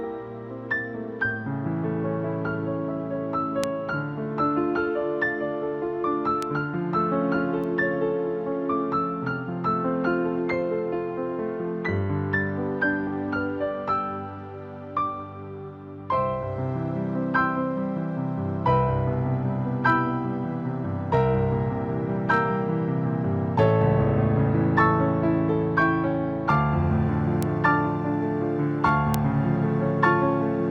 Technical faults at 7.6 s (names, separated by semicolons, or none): bit error spike